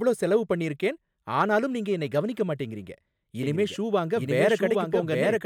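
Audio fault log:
3.43 to 5.46 s, doubled audio track: After "நீங்க என்னை கவனிக்க மாட்டேங்குறீங்க", a dry copy starts abruptly, roughly 0.7 s late and about as loud. It lasts to the end, likely from a second capture path.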